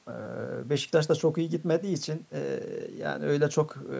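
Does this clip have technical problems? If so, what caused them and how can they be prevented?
No, this clip has no technical problems, so there is nothing that caused them and nothing to prevent.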